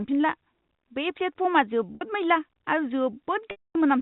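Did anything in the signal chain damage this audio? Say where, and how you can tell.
Yes. Packet loss with pitch repetition in the network at 1.95 s (60 ms, brief buzzy hold) and 3.51 s (240 ms, repeated pitch fading into silence).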